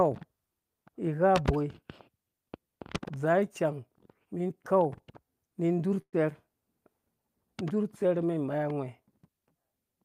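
At about 6.01 to 6.16 s there's a burst of packet loss: roughly 120 ms of speech went missing, and the receiver papered over it by stretching the last sound for about 110 ms, fading it toward silence before the speech picks up further on.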